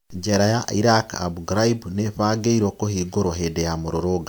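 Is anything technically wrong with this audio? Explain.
No, nothing technically wrong can be heard here.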